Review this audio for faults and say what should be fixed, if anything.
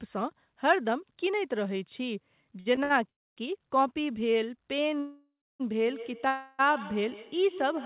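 Short stalls from late packets occur at 2.60 to 2.68 s, 2.76 to 2.79 s and 2.83 to 2.92 s. Each holds the last sound for 55, 15 and 66 ms, then resumes from the same place. Nothing is lost, but the speech drags with a slight buzz. A deeper or adaptive jitter buffer on the receiver would absorb these delays.

Call audio freezes occur at 3.10 to 3.39 s, 5.00 to 5.62 s and 6.28 to 6.61 s. The last sound continues as a fading buzz. It drops to silence for about a quarter second in the first two and stays as buzz in the third. Speech resumes where it stopped. Likely cause: packets held up in transit, starving the buffer. Fixing the congested or unstable network link would stop these freezes.

Feedback echo between two devices runs from 5.81 s to the end. The speech returns roughly every 150 ms, thinner and ringing, at about 16 dB below the speech. It continues through the final freeze. Another device in the room is replaying this microphone's signal, and the echo canceller cannot remove it. 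Muting the second device or using headphones would break the loop.

All of this sits on the narrowband G.711 call path, with nothing above 4 kHz.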